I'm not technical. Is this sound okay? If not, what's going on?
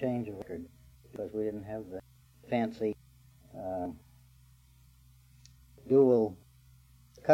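No. The recording system likely fell behind and lost chunks of audio, a dropped buffer (overrun). At 0.42, 1.16, 2.00 and 2.93 seconds, about a sixth of a second vanishes, and at 3.85 seconds a shorter piece does. Each loss sounds like a sudden skip ahead.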